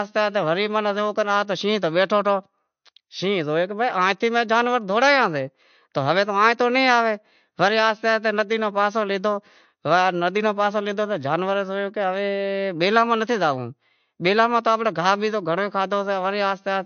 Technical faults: MP3 compression

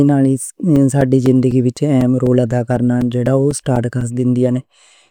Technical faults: periodic USB or driver dropouts

